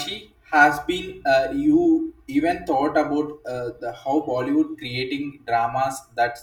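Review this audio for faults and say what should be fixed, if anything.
Channel delay (comb filtering) runs through the whole speech clip. One channel arrives roughly 3 ms behind the other, and when the two are folded to mono, the content they share cancels at regularly spaced frequencies. The first notch sits around 200 Hz, with further notches repeating at even intervals up the spectrum. This fixed pattern of gaps gives the voice its hollow, phasey colour from start to finish. To prevent it, time-align both channels to the same sample before summing, or use a single channel rather than mixing a delayed pair to mono.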